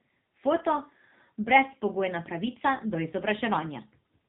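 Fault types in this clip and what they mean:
AMR narrowband mobile codec: buzzy, synthetic speech with nothing above 4 kHz, from heavy coding at a rate that fits 6.7 kbps, modelling each 20 ms frame with few pulses.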